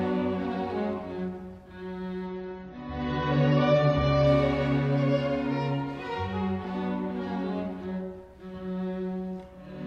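From 2.26 s to 4.26 s the audio switches abruptly to an adaptive stream at a lower bitrate, without any gap. A slowed connection forced the player onto a leaner encoding, which fits a step down from about 96 to 24 kbit/s AAC. For two seconds the treble vanishes and swirly, watery codec artefacts appear. On a spectrogram the energy above 6.9 kHz is sharply cut off for that stretch, then snaps back, while the waveform stays continuous.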